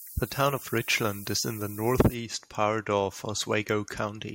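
From the start to 2.14 s, just before "part of", the speech shows low bit depth with noise shaping. Only about 7 bits carry the signal, and the rounding error is pushed upward, leaving a thin, bright hiss near the speech's level. Unlike plain truncation, it rises sharply toward the treble.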